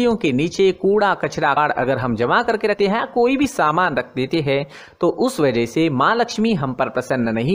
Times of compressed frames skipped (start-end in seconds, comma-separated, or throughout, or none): 1.56